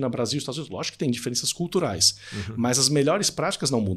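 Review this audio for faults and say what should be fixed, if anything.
Pre-emphasis left on, from 1.47 s just after "que tem" to the end: the treble boost, about 8 dB at 10 kHz, consistent with the CD 50/15 µs curve, was never de-emphasised, leaving speech thin and sibilant.

Apply the matching de-emphasis on playback or transfer whenever the source is flagged as pre-emphasised.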